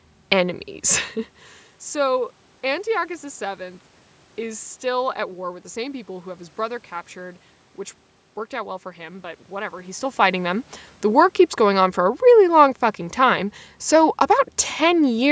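Nothing here is technically wrong with this speech recording: the room noise belongs to the space itself, and the level shifts around 1 s and again around 10 s are just the talker moving relative to the microphone.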